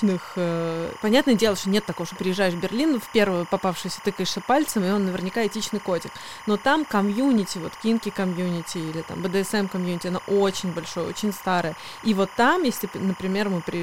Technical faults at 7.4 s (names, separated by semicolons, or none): timecode bleed